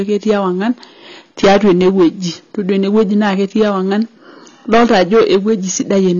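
Hard clipping runs through the whole clip. The speech was driven about 14 dB too hot, so peaks are cut flat. Loud syllables turn to fuzz. Roughly seven percent of the samples are sheared off.

Also throughout, nothing sounds above 6.9 kHz. The speech is plainly dull and smeared. This likely comes from AAC compression at a low bitrate, around 24 kbps.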